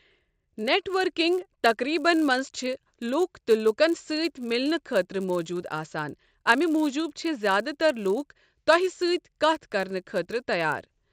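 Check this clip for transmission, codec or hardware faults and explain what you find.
A steady 100 Hz buzz rides on the speech throughout, present only while sound is playing. This comes from a resampler restarted on every block: each 10 ms block is converted separately, consistent with 16 kHz to 48 kHz, so every block edge carries a small error.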